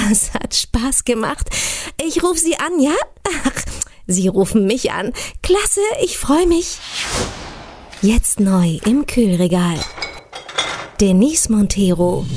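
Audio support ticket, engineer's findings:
No audible faults found; nothing to escalate.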